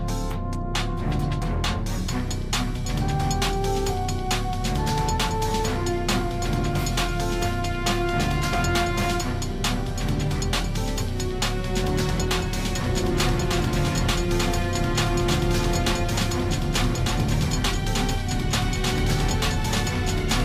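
A second copy of the signal, most likely captured again through a slower path or left out of step by an edit, is mixed in from 12.8 s and stays to the end, producing a doubled audio track. That copy runs about a second behind the original and sits roughly 5 dB quieter, full-band and dry, with no decay or room colour. It cuts in abruptly at 12.8 s, so everything after that point is heard twice, the late echo overlapping the fresh sound.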